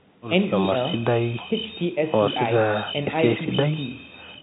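No faults are present in the speech; the G.711 telephone coding is working normally, with the band stopping around 3.8 kHz as that format does.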